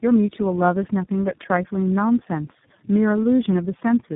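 From start to end, the speech carries tandem speech coding: it sounds as if it passed through three low-rate speech codecs in turn, likely GSM full rate, then AMR-NB, then iLBC, with decoding and re-encoding at each link. Every coder models the previous one's errors as if they were speech, so roughness and warbling stack up. Nothing reaches above 3.8 kHz. What separates this from a single narrowband codec is the compounded smearing and muffling, worse than any one coder gives.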